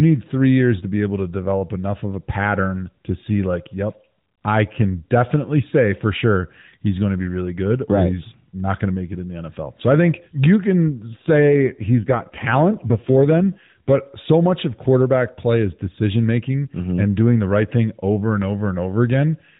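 From 11.13 s, after "I think you can", to 13.97 s, before "so much of quarterback", an AMR rate drop makes the speech rougher and more synthetic. That fits the codec stepping down from 12.2 to 5.9 kbps to spend bits on error protection, with unchanged bandwidth and no gap.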